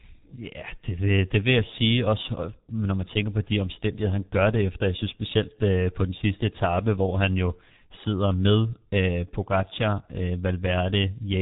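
Speech runs through G.723.1 codec damage from start to finish: muffled and hoarse, with smeared consonants, which fits a very low-rate telephony coder near 6 kbit/s. A spectrogram shows nothing above 3.8 kHz and harmonics blurred into coarse, slowly changing blocks.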